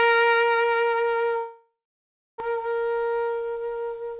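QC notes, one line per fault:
1.38–2.42 s, long network dropout: the music breaks off at 1.38 s, the last sound is stretched into a fading buzz, and that decays to silence for most of the gap, about 0.66 s of it. The cause is likely a stall in arriving audio: roughly 0.6 s of the music never plays, and when it resumes at 2.42 s the stream has jumped ahead, leaving the receiver carrying about 0.4 s of extra delay.
2.50–3.57 s, jitter buffer speed-up: right after the dropout, the music runs about 8% fast for just over a second while pitch stays unchanged, so the tempo audibly rushes and loses its steady pulse. The receiver is draining its backed-up buffer by cutting many short pitch-period slices, around a tenth of a second in total. The band-limited tone, with nothing above 4 kHz, fits a G.711 mu-law call path.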